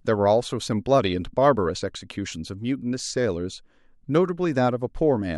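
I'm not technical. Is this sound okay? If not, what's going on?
Yes, this sound is okay, and nothing is going on that needs fixing.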